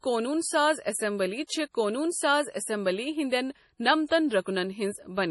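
From start to finish the speech carries heavy damage that points to MP3 compression as the likely cause, at a rate consistent with about 32 kbps. Starved of bits, the encoder discards everything above 11.5 kHz and drops weak frequency lines that flicker in and out between frames, giving a watery, swirling texture with metallic chirps on s sounds and smeared onsets. A spectrogram shows a hard ceiling at 11.5 kHz and speckled, patchy gaps below it.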